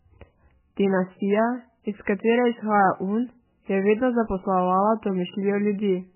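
Right from the start and all the way through, the speech has everything above 3 kHz gone, with a watery, swirly quality and smeared consonants. That's likely heavy MP3 compression at a very low bitrate, somewhere near 8 kbps, so weak frequency lines keep dropping in and out.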